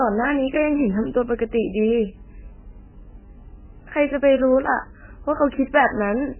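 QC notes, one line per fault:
Throughout, MP3 compression: the speech sounds watery and swirly, with a smeared, metallic edge on consonant onsets and nothing above 3 kHz, so it comes across dull and boxed-in. This is likely heavy MP3 encoding at a bitrate that points to something near 9 kbps. Starved of bits, the encoder cuts all treble at a fixed point and drops weaker frequency lines that flicker on and off between frames, causing the warble and blurred attacks.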